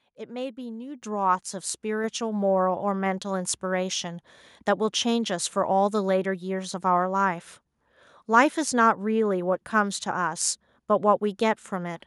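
At 1.02 s the call software judged the microphone too quiet and raised the device's input volume in a single step, a microphone volume step-up of about 8 dB. The speech and the background noise jump louder together at that instant and stay there.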